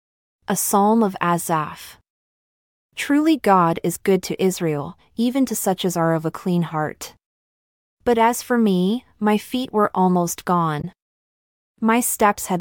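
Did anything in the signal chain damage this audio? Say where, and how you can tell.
Yes, at the codec or storage stage: damaged data in a compressed stream. Just after "my feet were almost", from 10.80 to 10.85 s, the decoder misreads the damaged frames and loses frame sync, searching for the next frame header.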